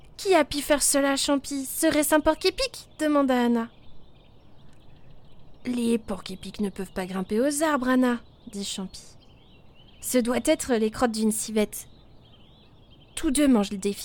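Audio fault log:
No faults can be heard anywhere in the clip. Nothing in the audio calls for an entry in this log.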